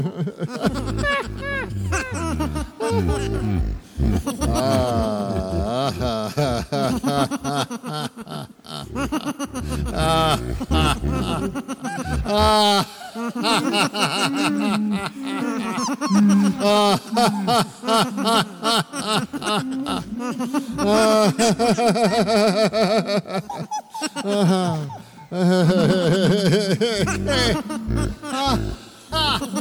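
Hard clipping runs throughout the clip, from start to finish. The signal was driven about 7 dB beyond what one stage in the chain could pass, so every peak that exceeded that ceiling was sliced flat, roughly one percent of the samples. Those squared-off tops generate harmonics reaching far up the spectrum, so the loudest moments carry an added gritty distortion that follows the peaks wherever they occur.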